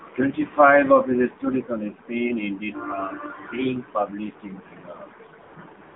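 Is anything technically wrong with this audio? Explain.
Yes. Throughout, the speech has passed through the AMR narrowband mobile codec. It rebuilds the voice from a vocal-tract model fed by sparse pulses, at a low rate that points to about 7.4 kbps. The line band runs only from 250 Hz to 3.6 kHz. The result is plainly buzzy and synthetic, with no top end.

From 5.42 to 5.56 s and again from 5.82 to 5.96 s, AMR comfort noise appears. Each time, the phone judged the talker silent and stopped sending speech frames for 140 ms. The receiver filled each gap with smooth, steady synthetic noise that switches in and out.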